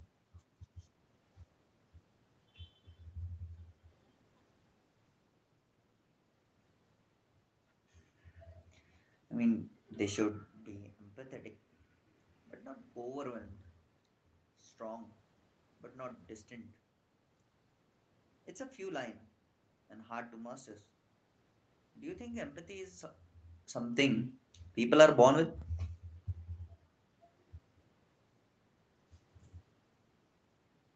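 The speech has no technical faults: it carries the band limit of a call path, with nothing above 8 kHz, room noise behind the talker, and level changes around 10 s and 23 s that come from the talker moving relative to the microphone rather than from the system.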